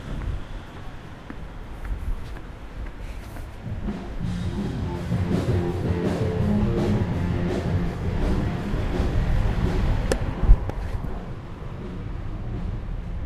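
Nothing goes wrong anywhere in this recording of everyday sounds, so there's no fault to point to at any moment.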